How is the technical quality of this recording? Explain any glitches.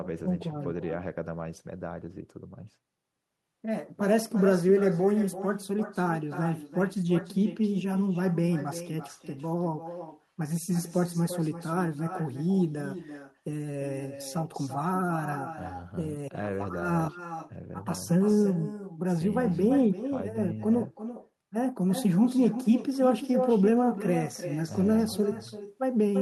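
The recording has one problem running throughout: echo with no canceller. The far end plays the speech back through a loudspeaker into its microphone. Each phrase returns roughly a third of a second later, about 12 dB quieter and thinner.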